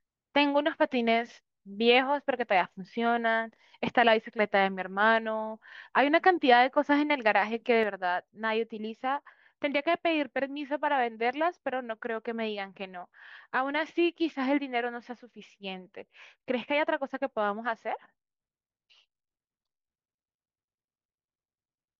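One channel drops out from 7.84 s to the end: the speech abruptly falls about 6 dB and stays there. The likely cause is one stereo channel going silent, so the mono sum loses half the material shared by both channels, and anything carried only in that channel vanishes.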